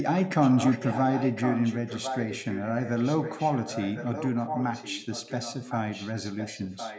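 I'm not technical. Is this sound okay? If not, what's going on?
No. From 0.2 s to 5.75 s, and again from 5.91 s to the end, the speech is followed by a quieter repeat of itself about 1.06 s later, and it is fainter in the second stretch. This is an echo leak. The likely cause is that one side of the call was on a loudspeaker, and its echo cancelling didn't fully remove what its microphone picked up, so the voice was sent back a second late.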